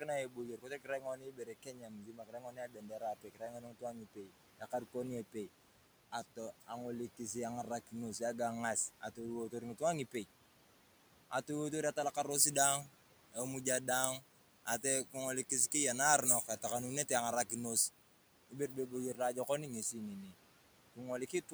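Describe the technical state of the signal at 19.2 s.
At 19.2 s the speech sounds thin, bright and hissy, with sibilants standing out. This is pre-emphasis left on, running from 12.31 to 19.83 s. An FM-style 75 µs treble boost was never undone by its matching de-emphasis, so 10 kHz sits about 13 dB above 1 kHz.

In the same moment, some soft speech sounds are swallowed and faint between 19.14 and 19.49 s, dropping by up to about 8 dB over roughly a tenth of a second in total. This is speech cut by the noise suppressor, which mistook those quiet parts for background and turned them down along with the room noise that sits about 20 dB under the speech.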